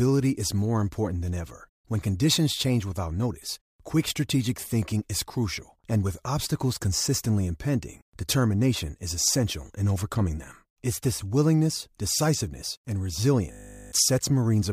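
A system hang loop runs from 13.52 to 13.92 s, just after "this willingness decisiveness and". The system stalled while the sound hardware kept replaying one 20 ms slice of its buffer twenty times, replacing about 0.4 s of speech with a steady 50 Hz buzz.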